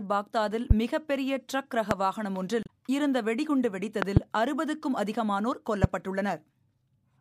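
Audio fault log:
0.71 s, 1.91 s, 4.02–4.19 s (a double) and 5.84 s: loud pop. Each is a sharp pop, roughly 20 dB above the surrounding sound, which carries on beneath it. The likely cause is an electrical step or pulse such as a plug, switch, static or driver glitch. On the waveform each shows as a tall spike, and on the spectrogram as a thin full-height vertical stripe.
2.63–2.69 s: damaged data in a compressed stream. Corrupt bytes made the decoder misread frames and lose sync while hunting for the next frame header, producing a brief disturbance. The spectrogram shows a brief garbled, smeared patch, and the waveform shows an abrupt discontinuity.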